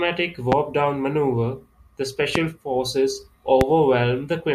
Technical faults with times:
0.52-0.55 loud pop
2.35-2.38 loud pop
3.61-3.64 loud pop

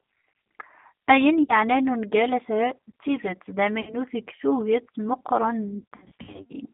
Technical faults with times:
0.00-6.74 G.729 codec
1.43-1.53 VoIP packet loss concealed by the speech codec
3.81-3.95 VoIP packet loss concealed by the speech codec
5.78-6.53 VoIP packet loss concealed by the speech codec

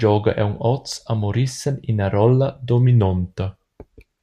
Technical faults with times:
2.86-3.89 drift correction step

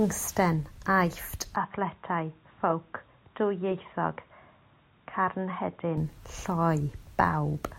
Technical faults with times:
1.56-5.98 input switched to a poorer device

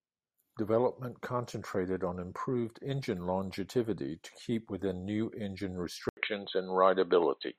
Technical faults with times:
6.09-7.58 input switched to a poorer device

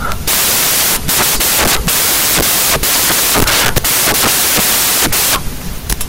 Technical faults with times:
0.00-6.08 samples built from the wrong bytes

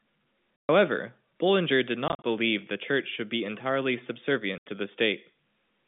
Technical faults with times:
0.58-0.69 packet loss filled with silence
2.08-2.24 packet loss filled with silence
4.58-4.66 packet loss filled with silence

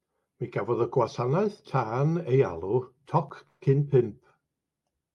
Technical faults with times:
3.47-3.64 call audio freeze

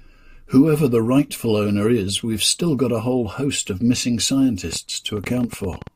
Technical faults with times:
4.73-5.88 train of clicks

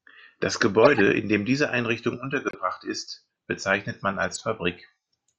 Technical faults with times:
0.83-1.01 corrupt frame decoded
2.47-2.55 corrupt frame muted
4.28-4.41 corrupt frame decoded

